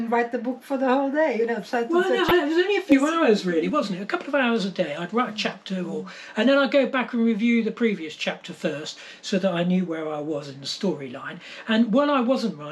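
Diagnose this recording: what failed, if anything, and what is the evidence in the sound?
Weak DAB reception let bit errors slip past the error correction into the MP2 codec data, corrupting samples and scale factors. This is DAB burbling: from 2.28 to 2.31 s, single sub-bands get short blips of noise, over a brief patch that fits roughly three damaged frames.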